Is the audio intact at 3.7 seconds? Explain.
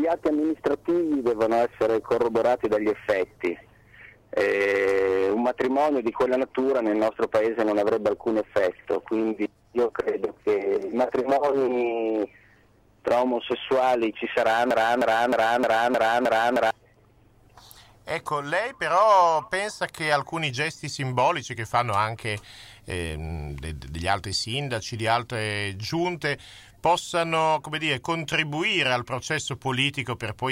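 Yes, at 3.7 seconds the audio runs intact, with no dropout, click, distortion or other fault at that moment.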